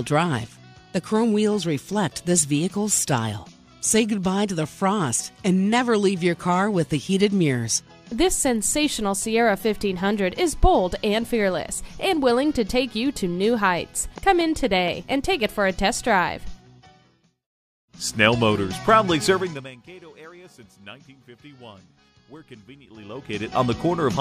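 From 14.18 to 15.13 s there's a train of clicks: about five regular pops at 4.23 per second, peaking roughly 5 dB over the sound, likely interference or a faulty connection. Zipper noise shows up at 19.35 to 19.75 s, where the level drops by roughly 25 dB in 2 dB steps at around 30 a second, each step ticking audibly. It shows up again at 22.87 to 23.62 s, where the level climbs back roughly 25 dB at about 15 steps a second.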